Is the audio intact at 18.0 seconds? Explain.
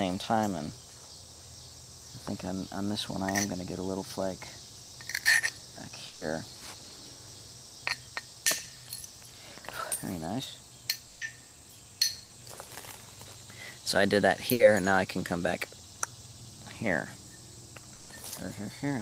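No. A burst of packet loss from 17.95 to 18.11 s left about 140 ms undelivered, so the receiver stretched and faded the preceding sound before resuming further on.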